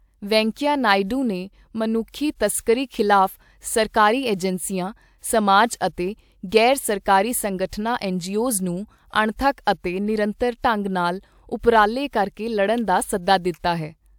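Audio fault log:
No faults are heard anywhere in the speech recording. There is nothing to enter in this log.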